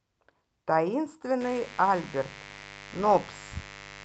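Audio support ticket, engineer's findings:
Mains buzz, 1.41 s to end of clip. Steady raspy buzz under the speech, around 20 dB below it. 50 Hz mains interference, probably from a dimmer, rectifier or unshielded cable, where sharp switching spikes twice per cycle enter the signal path. Spectrogram: evenly spaced horizontal lines at 50 Hz multiples climbing into the kHz range. Waveform: repeating spiky ripple every 10 ms.

Lost packets rebuilt from error correction, 2.49 to 2.63 s. No dropout, but about 80 ms of rough, noisy speech, which fits four separate 20 ms frames. Opus decoder substituted the low-bitrate in-band FEC copies carried in later packets. Spectrogram: short smeared, grainier patch below the 8 kHz codec cutoff. Waveform: continuous over that stretch.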